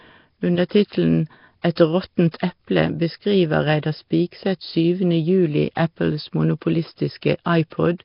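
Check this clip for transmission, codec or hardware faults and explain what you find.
Two faults are audible: heavy codec damage across the whole recording and one pre-echo.

Nellymoser compression runs throughout. The speech has a rough, hissy halo and a smeared, underwater quality, with nothing above 5.3 kHz. The likely cause is a Flash-era Nellymoser Asao encoder at a low rate, around 22 kbps, where weak bands receive no bits and are replaced with synthetic noise.

Pre-echo occurs at 1.76 s. A sharp attack is preceded by about 16 ms of hiss and sounds softened. The transform codec spreads quantisation noise across its whole block, so the noise sized for the loud onset also fills the quiet moment just before it.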